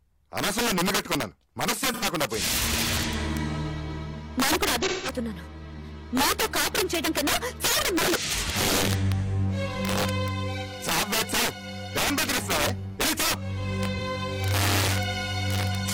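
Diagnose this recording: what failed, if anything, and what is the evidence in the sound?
Integer overflow at a gain or sample-format conversion stage: throughout the clip, loud peaks crack violently, far sharper than clipping. Driven about 10 dB past full scale, a small share of samples wrap to the opposite sign. A waveform shows peaks flipping rail to rail, and a spectrogram shows broadband vertical streaks.

AAC frame loss with concealment in the codec path: smeared, phasey patches occur at 1.88–2.04 s, 4.83–5.11 s and 13.96–14.01 s. The longest, 0.28 s, fits about four lost frames. The decoder refilled these gaps from the last good spectrum, so a spectrogram shows blurred, frozen-looking bands rather than silence.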